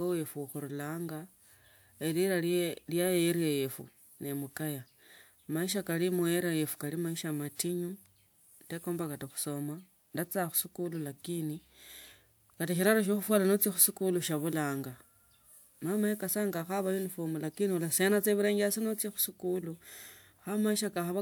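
Nothing stood out on listening to this speech recording; no technical faults could be heard at any point.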